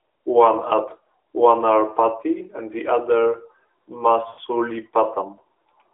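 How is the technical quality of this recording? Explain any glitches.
The sound is narrowband mobile speech, band-limited to about 300 Hz to 3.5 kHz with light coding damage. One glitch stands out. From 4.28 to 4.40 s, lost AMR speech frames drain the voice into a smeared, fading stretch. The decoder repeats old settings with falling gain across 100 ms, which fits five lost 20 ms frames.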